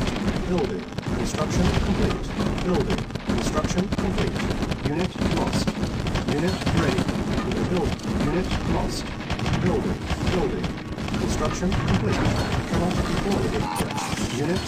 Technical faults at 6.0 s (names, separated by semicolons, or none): frames out of order